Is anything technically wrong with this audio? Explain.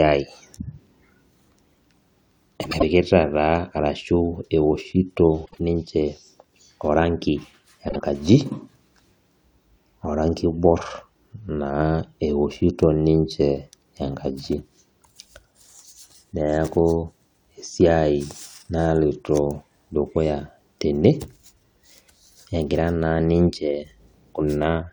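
Yes. The speech has frames out of order at 2.63 to 2.83 s, 5.46 to 5.59 s and 7.89 to 8.02 s. Two adjacent blocks, about 78.4 ms in the first and 52.2 ms in the others, were decoded in swapped order. Each stretch plays as a brief garbled flutter, with no lost time.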